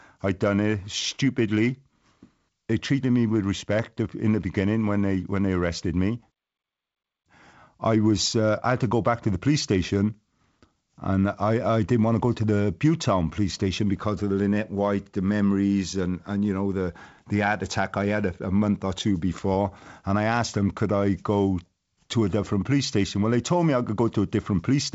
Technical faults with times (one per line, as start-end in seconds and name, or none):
none